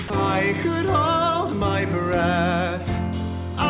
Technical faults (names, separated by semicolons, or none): sound dropped by the voice detector